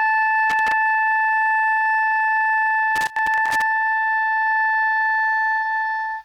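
At 0.50 to 0.72 s, and again for longer from 2.96 to 3.62 s, the music is broken up by loose connector crackle. A worn or dirty contact keeps making and losing connection, chopping the signal. Unlike evenly spaced digital clicks or steady vinyl surface noise, these bursts are irregular and scratchy, tied to physical movement.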